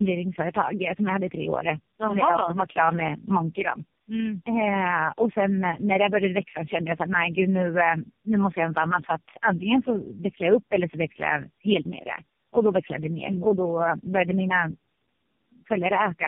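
A speech recording suffering from tandem speech coding throughout. The sound is rough, muffled and warbly, with nothing above 3.4 kHz. Three low-rate speech coders in a row each re-encoded the previous one's decoded output, which fits a G.723.1, G.729A and AMR-NB chain, so the damage compounds.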